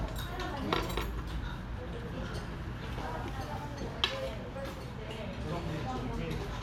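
Everyday sounds, with nothing technically wrong to report anywhere in the recording.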